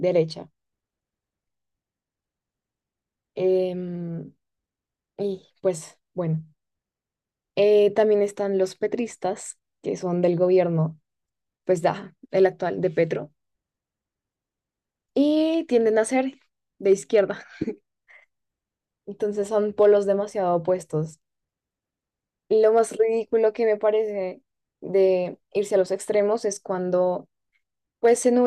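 Hard clipping hits the speech at 7.99 s, then from 12.42 to 12.46 s, 16.92 to 17.19 s, 19.81 to 19.86 s, 22.64 to 22.79 s and 28.05 to 28.27 s. Each time the peaks exceed what a stage can pass by about 1 to 2 dB, so the tops are sliced flat. This is heard as brief crackle on those loud moments. On the waveform, the peaks form flat plateaus. The spectrogram shows faint vertical streaks of added high harmonics.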